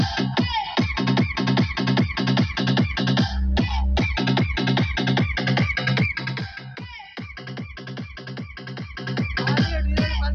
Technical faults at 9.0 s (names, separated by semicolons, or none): zipper noise